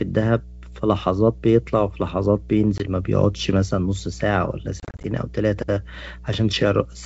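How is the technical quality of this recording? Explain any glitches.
Two problems stand out: a steady mains hum under the whole speech clip, and two dropout glitches from packet loss on what sounds like a G.722 call, with the wideband coding itself clean at 64 kbit/s.

The mains hum is a constant low 60 Hz tone, roughly 20 dB under the speech. A ground loop or nearby transformer is leaking the power line into the signal.

The first packet loss on the ADPCM call hits at 2.78 to 2.85 s. About 20 ms, a couple of packets, drops to silence. Then the decoder's predictor briefly loses sync, so you hear a sharp hole and slightly distorted speech on recovery.

The second is rougher. From 4.80 to 5.08 s, about 140 ms goes missing in bits of up to 30 ms, scattered over 240 ms, probably a dozen or more packets. It sounds choppy and stuttery, with distortion as the decoder keeps resyncing.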